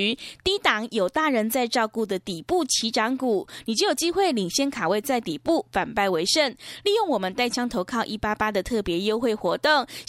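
Speech recording with no audible technical faults.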